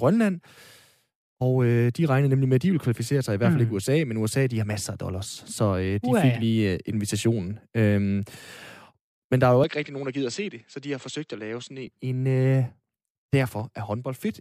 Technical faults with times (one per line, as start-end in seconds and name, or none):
9.64-11.87 input switched to a poorer device